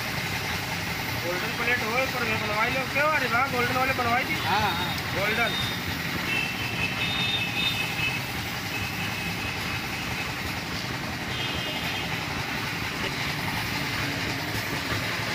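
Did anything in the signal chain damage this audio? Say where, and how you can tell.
Yes, at the codec or storage stage. There's damaged data in the compressed stream at two points, 10.57 s and 13.08 s, each a brief chirp or blip that doesn't belong to the sound around it. Some bytes in the encoded file were lost or overwritten there, so the decoder misread those frames, lost its sync, and had to hunt for the next valid frame header before it could carry on decoding.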